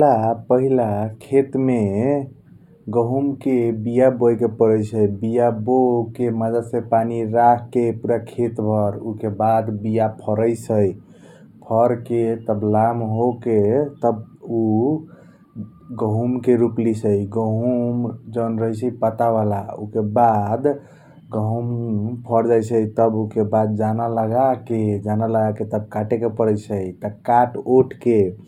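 Throughout the speech, channel delay (comb filtering) gives a dull, slightly hollow top end: one channel trails the other by only a fraction of a millisecond, a few samples' worth, so the mono sum cancels near 7 kHz. Unlike a low-pass roll-off, brightness returns above that notch.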